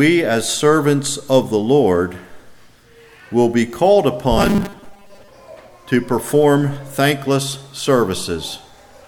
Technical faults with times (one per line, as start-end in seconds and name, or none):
4.38-5.28 robotic sound from repeated short buffers